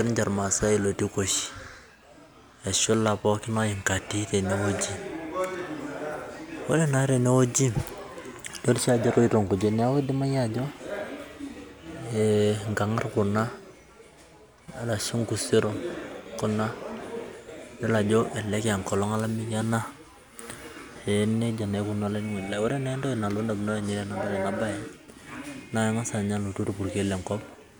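No technical faults can be heard anywhere in the recording.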